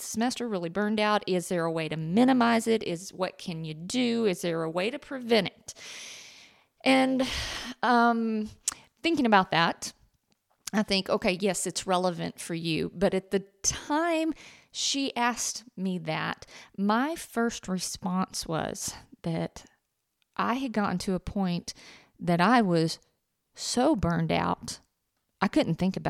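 From 2.01 to 7.57 s the speech carries periodic clock jitter. Interference near 100 Hz wobbles the converter's sampling clock. Each component gains sidebands spaced about 100 Hz on either side. Higher frequencies suffer most. The result is a rough, metallic edge that disappears in pauses.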